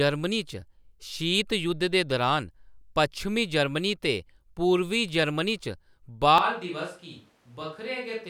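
At 6.38 s the speech abruptly turns roomy and hollow and stays that way to the end, the sound of a switch to a distant microphone, likely because the close microphone's feed dropped out and a farther pickup took over. The level falls by about 10 dB, bass thins, and room noise rises to around 35 dB below the speech. On a waveform the envelope shrinks suddenly; a spectrogram shows weaker low frequencies, smeared reverberant tails and a lifted noise floor.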